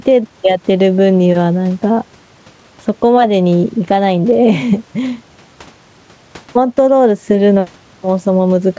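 Gain pumping runs through the whole clip. The level swings by around 10 dB. The faint room noise sits about 40 dB below the speech. The likely cause is gain set far too high, with a fast limiter pulling it down.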